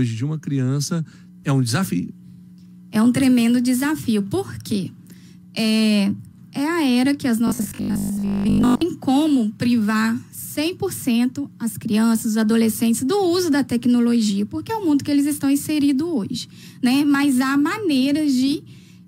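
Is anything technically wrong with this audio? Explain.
Yes. From 7.47 to 8.81 s, robotic sound from repeated short buffers: a rigid 50 Hz metallic buzz, likely a 20 ms chunk replayed while most incoming audio is skipped.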